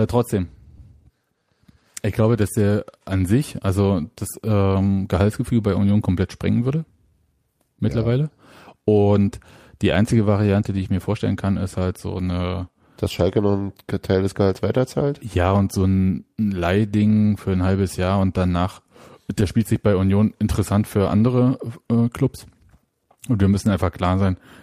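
Clock drift between sender and receiver runs through the whole speech clip, with the sender's clock about 2% slow, so the receiver's buffer keeps draining. From 0.16 s to 23.86 s, repeated timing corrections fill the gap by repeating short pieces, playing at 98% speed and adding about half a second.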